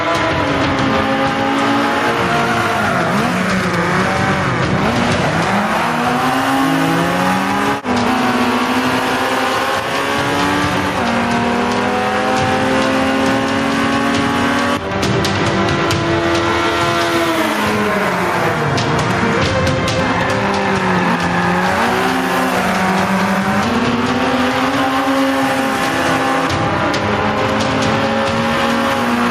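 Gain pumping runs through the whole clip, with the overall level swinging by around 10 dB. Loud and quiet passages sit unnaturally close together, and the sound has a squashed, breathing quality. The likely cause is input gain set far too high for the microphone, with a fast limiter or compressor clamping down on each peak and releasing in between.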